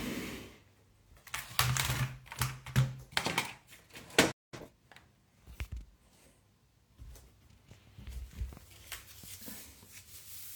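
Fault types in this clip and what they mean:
playback stall: The player likely ran short of data or had its output thread blocked, so nothing reached the output from 4.31 s to 4.54 s. The sound cuts off mid-flow into a gap of about 0.21 s before resuming.
time-compressed catch-up: Right after the stall, the player clears its backlog by dropping small slices and cross-fading the remainder. From 4.54 s to 4.74 s the sound runs at twice normal speed, hurried yet unchanged in pitch.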